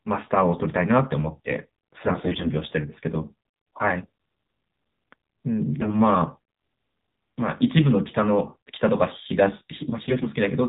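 From start to finish, this speech has gone through the AMR narrowband mobile codec, here AMR-NB at 7.4 kbps, and the damage is plainly audible. With narrowband sampling nothing above 4 kHz survives, so sibilants lose their edge. At so few bits the voice model rebuilds each frame from a handful of excitation pulses, which leaves the voice buzzy and synthetic rather than natural.

AMR bit errors strike three times: from 1.94 to 2.50 s, from 5.78 to 5.96 s, and from 10.02 to 10.28 s. In each span the weaker-protected bits of the frames arrived corrupted at an error rate of around 7 to 10 percent, while the check on the core bits still passed. The decoder therefore placed excitation pulses wrongly and used slightly wrong pitch, gain and spectral values. Pitch and loudness roughly hold, but the voice turns hoarse, scratchy and gargly.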